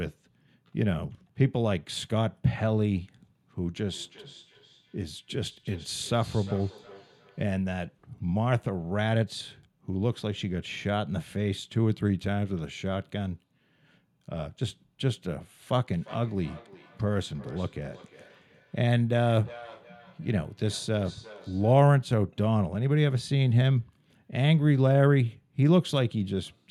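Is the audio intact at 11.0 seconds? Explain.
Yes, the speech at 11.0 seconds is intact, with no audible dropout, click, distortion or other fault at that moment.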